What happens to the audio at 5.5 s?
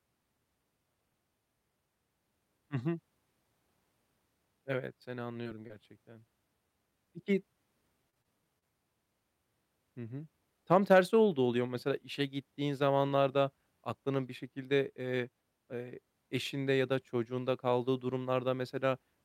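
Just before then, from 5.43 to 5.47 s, there is a short concealed packet loss: about 20 ms went missing and the decoder extrapolated the preceding speech, leaving a brief smear.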